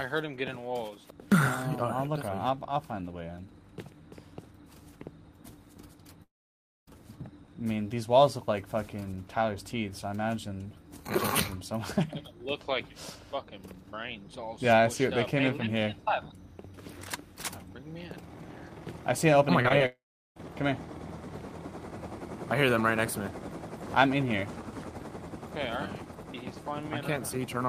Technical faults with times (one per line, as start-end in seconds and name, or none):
6.23-6.89 long network dropout
19.63-19.82 short concealed packet loss
19.86-20.38 long network dropout